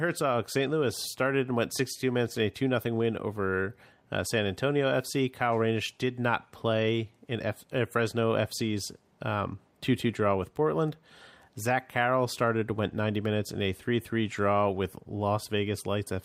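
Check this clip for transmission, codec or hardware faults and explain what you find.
Nothing here points to a transmission, codec or hardware problem, so there's nothing to flag in this speech recording.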